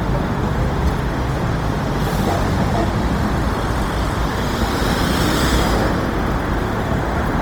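Throughout the clip the sound has a rough, grainy texture, with tonal parts breaking into noise and a gritty sheen over the whole band. There is no dulling and little swirl, and content reaches to about 20.3 kHz. The fault is likely Opus compression in its CELT music mode at a low bitrate, around 24 kbps. Short of bits, the encoder keeps each band's energy but refills detail with folded or noise-like content, which is what produces this plainly audible coarseness.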